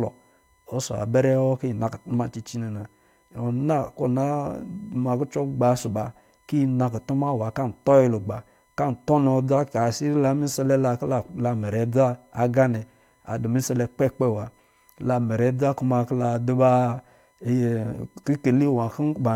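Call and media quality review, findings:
Faint steady whine at 1 kHz throughout the speech, roughly 40 dB below it. USB whine: the bus's 1 ms frame current leaking into the audio through power or ground.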